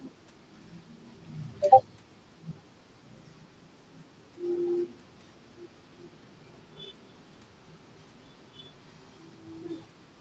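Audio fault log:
No faults: the speech has passed through call microphone processing and an Opus call path, with content ending at 8 kHz as that path's bandwidth sets it.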